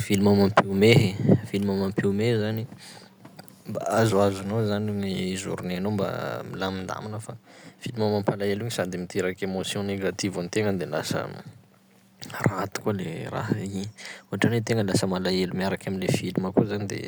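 A speech recording with a harsh, crackling edge on two loud moments near the start, from 0.57 to 0.59 s and again from 0.91 to 0.98 s. The first burst is the rougher of the two. The tops of the waveform are flattened there, with peaks pushed about 6 dB past the converter's limit and roughly 7% of samples clipped. The second burst goes only about 2 dB over and clips far fewer samples. This is likely microphone overload, where input gain set too high drives the loudest peaks into the converter's limit, squaring them off and adding that brittle distortion. Right afterwards, at 1.02 s, the whole signal, voice and background together, drops by about 3 dB in a single step. That abrupt level change, following straight on from the distorted peaks, points to the microphone volume being stepped down by the call software reacting to the clipping and cutting the device's input gain at once.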